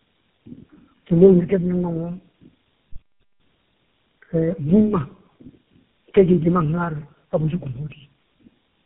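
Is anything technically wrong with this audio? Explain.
Yes. Tandem speech coding runs through the whole clip. The sound was decoded and re-encoded by about three low-rate speech codecs in a row, each working on the previous one's damage, leaving rough, muffled, warbly speech with nothing above 3.7 kHz.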